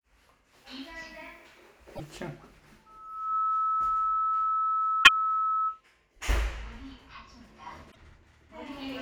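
At 1.92 to 2.01 s there's a short blip from damaged data in the compressed stream: the decoder hits corrupt frames, loses sync and hunts for the next frame header, so you get a brief glitch. From 2.86 s a loudspeaker feedback squeal takes over. The mic is hearing its own speaker, and the loop gain tops one at 1.3 kHz, so that tone swells over about half a second to roughly 10 dB above the sound and holds until 5.81 s. Underneath it, the same stream damage strikes again at 5.00 to 5.09 s, and once more, after the squeal, at 7.88 to 7.96 s.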